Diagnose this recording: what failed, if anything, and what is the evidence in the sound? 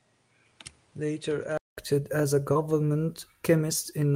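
For the first 1.77 s the sound is dull and boxy, with nothing above 10.5 kHz, a level about 10 dB lower and its own background noise roughly 35 dB under the signal. A 0.2 s silence follows before "as a" returns full-band. At the driver or device stage, this is likely an input switched to a poorer device.

Just after "as a", from 2.53 to 2.57 s, there is a brief smear where the sound wobbles. This is short concealed packet loss at the network stage. About 20 ms never arrived, and the receiver synthesised 14 ms of continuation from the preceding sound before blending back.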